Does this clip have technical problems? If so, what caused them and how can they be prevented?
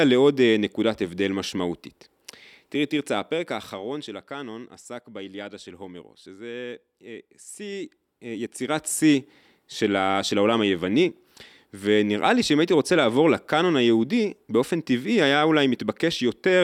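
Yes. Zipper noise ticks over the speech from 2.92 to 4.33 s and again from 7.55 to 9.06 s. The level drops, then rises, by about 15 dB in 1 dB jumps, roughly ten a second. Each unsmoothed jump clicks. Interpolating gain per sample prevents it.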